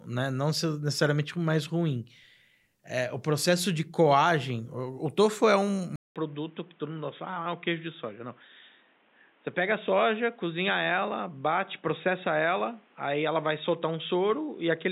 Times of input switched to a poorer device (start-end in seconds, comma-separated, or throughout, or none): 5.96-14.91